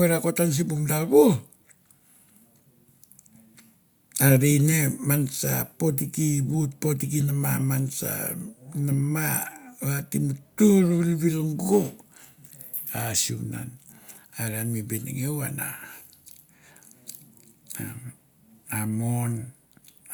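A speech recording with no audible technical fault anywhere in the signal.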